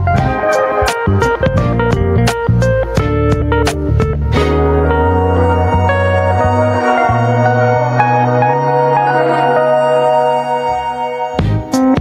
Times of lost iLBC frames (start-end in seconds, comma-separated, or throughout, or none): none